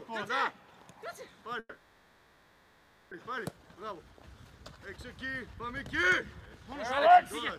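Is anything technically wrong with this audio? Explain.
Yes. From 1.59 to 3.13 s there is a call audio freeze: the last sound is stretched into a fading buzz or hiss lasting about 1.5 s, with only a brief silence of around 30 ms. The likely cause is packets held up in transit until the jitter buffer ran dry. When the audio resumes it picks up exactly where it stopped, with nothing skipped, so everything after is simply delayed by about 1.5 s. A lost-packet dropout would instead lose material.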